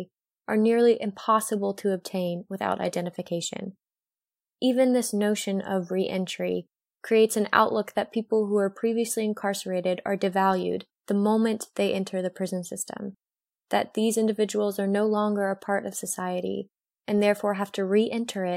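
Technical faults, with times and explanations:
Nothing stood out as a technical fault on listening to this speech recording.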